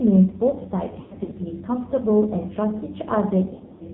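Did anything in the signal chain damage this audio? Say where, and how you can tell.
Yes. Throughout, the speech sounds buzzy and synthetic, with nothing above 4 kHz. That points to the AMR narrowband mobile codec at the codec stage, running a low mode near 6 kbps. Too few bits drive its vocal-tract model, so the damage is heavy.

At the network stage there are lost AMR speech frames from 1.00 to 1.34 s and from 3.54 to 3.84 s. In both places the speech smears, warbles and dips, then returns rough. The decoder filled failed frames by repeating earlier settings at falling gain. The longest gaps are 100 ms and 80 ms.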